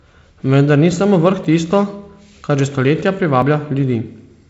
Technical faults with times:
1.44 audio missing between chunks
3.42 audio missing between chunks

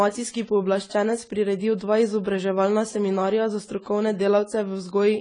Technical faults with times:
0.00-5.21 AAC compression

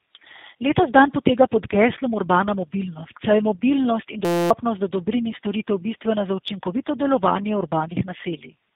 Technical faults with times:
0.00-8.76 tandem speech coding
4.25-4.50 system hang loop

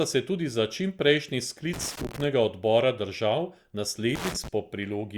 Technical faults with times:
1.73-2.24 loose connector crackle
4.15-4.48 loose connector crackle

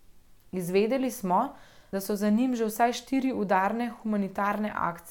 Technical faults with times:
1.93-2.11 compressed frames skipped

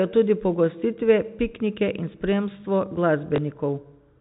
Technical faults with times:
3.36-3.38 packet loss with last packet repeated

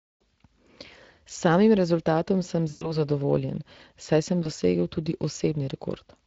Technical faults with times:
0.00-6.26 Speex codec
2.69-2.97 VoIP packet loss concealed by the speech codec
4.43-4.48 VoIP packet loss concealed by the speech codec

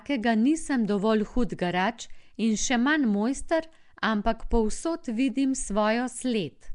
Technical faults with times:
0.00-6.74 Nellymoser compression

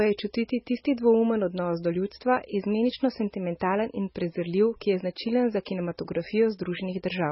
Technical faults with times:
0.00-7.31 MP3 compression

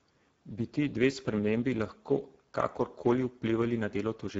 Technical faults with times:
0.00-4.40 Speex codec

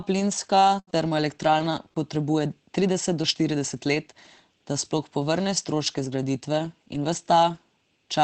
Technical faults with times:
0.79-0.90 burst of packet loss
0.87-1.11 lost packet rebuilt from error correction
1.41-1.65 lost packet rebuilt from error correction
1.90-1.96 lost packet rebuilt from error correction

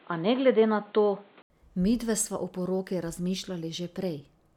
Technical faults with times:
0.00-1.50 input switched to a poorer device

